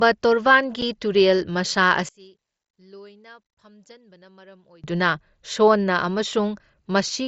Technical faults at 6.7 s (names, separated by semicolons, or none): none